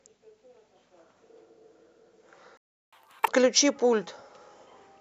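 The player most likely ran short of buffered data, or its output thread was blocked, and this speech recording suffers a playback stall from 2.57 to 2.93 s. The sound cuts out in mid-flow and leaves about 0.35 s of silence before resuming. The player then resamples its backlog to regain the lost time, producing catch-up at higher speed from 2.93 to 3.28 s. Playback runs at 2.0 times normal speed, so the speech sounds hurried and its pitch jumps up by roughly ten semitones, giving a chipmunk-like quality. After 3.28 s, speed and pitch drop back to normal.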